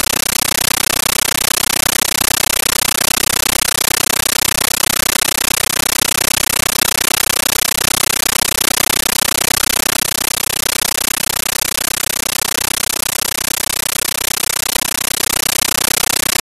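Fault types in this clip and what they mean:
Compressed stream played as audio: undecoded AC-3 data heard as loud chattering static instead of speech; the waveform shows 13.3 ms noise bursts, 31 per second, between flat gaps, and the spectrogram shows broadband stripes.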